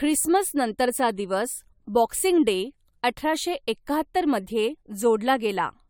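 From start to finish the speech has a swirly, hollow quality, with consonant attacks smeared rather than crisp and the top end stopping dead at about 19.6 kHz. That's more smearing than a single decent encode would leave, so this is likely generation loss: the audio seems to have been through an AAC-LC encoder around four times at something like 96 kbit/s, each pass re-quantising on a shifted frame grid and stacking fresh noise onto the last.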